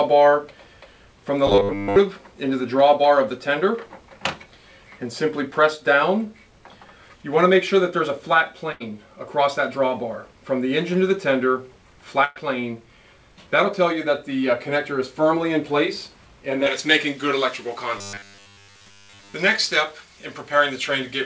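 Robotic sound from repeated short buffers, 1.47 to 1.96 s: the sound turns into a rigid, metallic buzz at a fixed 100 Hz that still roughly tracks the underlying audio. The likely cause is audio arriving too seldom, so the playback side loops the last 10 ms of sound to fill time while most of the real material in this stretch, around two thirds or more, is skipped. The loop length sets that 100 Hz pitch.

Burst of packet loss, 8.72 to 8.83 s: about 80 ms of audio never arrived in time. The receiver stretches the last sound it had across the gap, fading it as it goes, so a held, decaying tone or hiss is heard before the sound resumes further on, with roughly 80 ms of material gone.

Burst of packet loss, 12.24 to 12.39 s: a longer gap of about 120 ms, concealed in the same way. The final sound is extended and faded with no drop to silence, then playback jumps ahead, having lost about 120 ms.

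Pre-emphasis left on, from 16.66 s to the end: the treble boost applied for transmission is never undone by the matching cut. The response fits a J.17 curve, and the top end sits about 11 dB higher at 10 kHz than at 1 kHz. The sound becomes thin, bright and hissy, with exaggerated sibilance up to the 8 kHz ceiling of the call codec.

Robotic sound from repeated short buffers, 17.98 to 19.34 s: the same 100 Hz metallic buzz returns for over a second, overlapping the over-bright section. As before, 10 ms loops likely stand in for late audio while much of the real sound is dropped.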